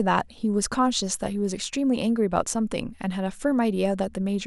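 Speech recording with no audible technical faults.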